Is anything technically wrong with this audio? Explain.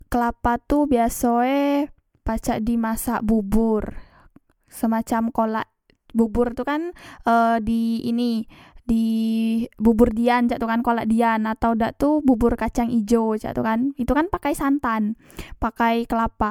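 Yes. Throughout, the speech sounds swirly, hollow and smeared, with blurred attacks. This is likely generation loss from about four MP3 re-encodes, each requantising on a shifted frame grid so the errors accumulate.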